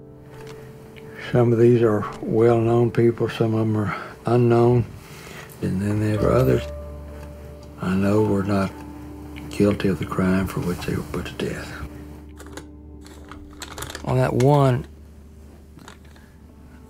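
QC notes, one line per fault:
No technical faults are audible anywhere in the signal, which holds steady and continuous across the whole clip.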